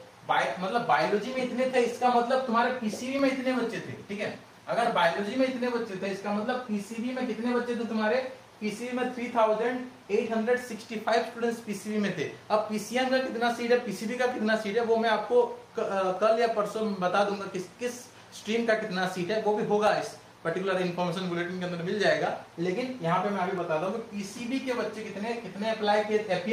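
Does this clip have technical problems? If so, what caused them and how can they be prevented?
Yes. From about 1.34 s to 25.4 s there's a click roughly every 1.85 s, around fifteen in all. That steady spacing points to clock drift buffer slips, likely from two devices on separate clocks that disagree by a couple of hundred ppm, so the buffer between them drifts until it drops or repeats a chunk of around fifteen samples. To prevent it, lock both devices to one shared clock or resample between them.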